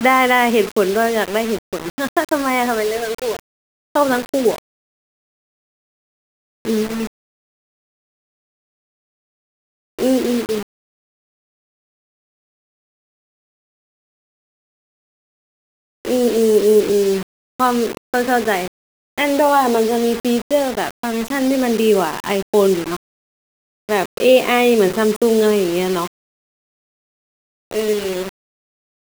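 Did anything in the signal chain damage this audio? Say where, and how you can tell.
Yes. Grainy, gritty distortion tracks the speech throughout, with quiet passages dropping to silence or sputtering. It's likely low bit depth without dither at sample-format conversion: rounding to 5 bits leaves error only about 20 dB down.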